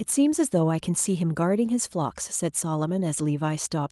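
No technical faults can be heard anywhere in this speech recording. The audio runs without interruption, with nothing that points to a problem in the chain that carried it.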